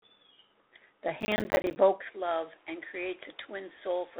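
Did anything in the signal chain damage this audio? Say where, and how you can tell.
Yes, and the codec stage is the first culprit. The whole clip sounds like G.726 ADPCM at 24 kbit/s: only the 250 Hz to 3.7 kHz telephone band survives, with nothing above 3.8 kHz, and there's a harsh, rasping hiss that rises and falls with the speech. That hiss comes from coding each sample as a coarse 3-bit difference from a prediction, so the error swells whenever the signal level does.

From 1.21 to 1.76 s there's processor overload crackle at the driver/buffer stage. It's a gritty, tearing burst made of many tiny silent gaps with hard edges. The spacing fits buffers of around 10 ms, and it sounds like a long run of them, a few dozen, missed back to back. The processor was clearly falling behind on deadlines, and each late buffer was played out as silence. Once the load eased, the crackle stopped.

At 2.01 s the sound changes character and stays that way to the end. 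There's no gap at the changeover, but the level drops by about 5 dB, the top end is capped near 3.9 kHz, and a different background noise floor appears, roughly 30 dB under the speech. That pattern most likely means the input was switched to a poorer device partway through, so this is a capture-side problem rather than anything the line added.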